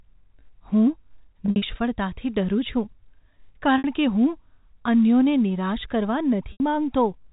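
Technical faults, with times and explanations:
1.46–1.62 s, 3.78–3.84 s and 6.52–6.60 s, packet loss with pitch repetition: about 120 ms is missing across the first stretch, in gaps of up to 60 ms, then 60 ms and 80 ms. The receiver fills each gap by looping the last pitch cycle, so the speech briefly holds a buzzy, frozen tone before fading. On a spectrogram, flat harmonic lines run level under the 4 kHz telephone ceiling. The waveform shows identical repeated cycles under a decaying envelope.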